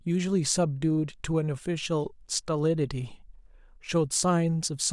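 Speech recording with no audible faults present.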